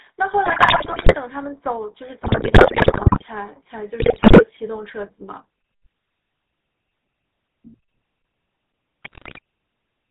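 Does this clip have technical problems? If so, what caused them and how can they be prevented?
Yes. The speech has the gravelly, buzzy roughness of the GSM full-rate codec throughout, and the damage is plainly audible. The codec rebuilds the voice from a vocal-tract filter driven by sparse regular pulses. Nothing above 4 kHz survives. This fits a 13 kbps full-rate link. Prevent it by carrying the call over a wideband codec such as AMR-WB.

GSM bit errors break the speech into squawks, pops and gargling at 0.44 to 1.16 s, 2.22 to 3.24 s, 4.0 to 4.43 s and 9.03 to 9.39 s. Corrupted bits reached the decoder. Damaged filter, pitch and gain values warped the spectrum and caused level jumps, frame by frame. Prevent it with a stronger signal and better error protection on the radio link.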